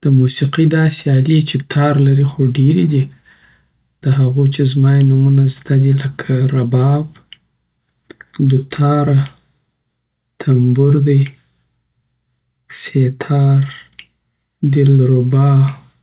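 No technical faults can be heard in this speech recording. It comes through a WebRTC call path working normally, and the sound stops at 4 kHz, which fits the narrowband G.711 mu-law codec at 64 kbps.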